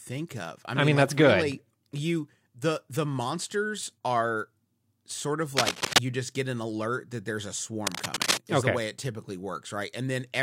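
From 5.57 to 5.99 s, after "sort of", cable scratch noise rasps above the speech. At 7.87–8.41 s, after "alert that there's a", it returns at about speech level. A worn connector being moved is the likely cause.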